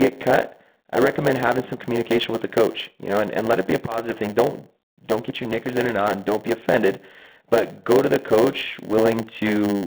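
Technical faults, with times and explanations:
Throughout, G.726 ADPCM: the speech is confined to a telephone band of roughly 150 Hz to 3.5 kHz, with nothing above 4 kHz. A harsh, rasping hiss rises and falls with the speech level, which fits the coarse 24 kbit/s mode.
Throughout, block size mismatch (padded): a steady 100 Hz buzz runs under everything because each block ends with a short run of zeros. The speech runs slower, at about 0.92 of normal speed, while its timbre stays.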